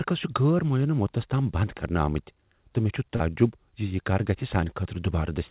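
Around 3.16 to 3.22 s there's a short concealed packet loss. About 40 ms of the speech never arrived in time, so the receiver stretched the preceding sound across the hole and blended back, leaving a brief smear there. The call path's band limit sits at 4 kHz, which fits G.711 mu-law.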